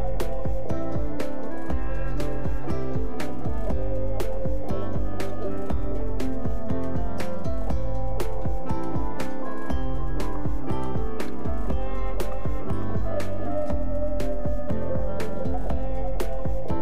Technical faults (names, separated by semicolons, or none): DC offset